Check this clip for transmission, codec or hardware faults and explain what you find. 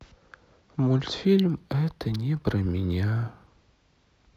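One fault stands out in this speech. From 1.25 to 3.47 s there is imaging from linear upsampling. The top end sounds dulled, with a faint metallic shimmer on sibilants. Linear interpolation, which fits a 16 kHz source raised to 44.1 kHz, leaves mirror images from 8 to 16 kHz, roughly 40 dB down.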